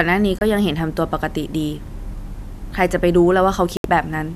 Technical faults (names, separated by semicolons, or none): digital broadcast dropout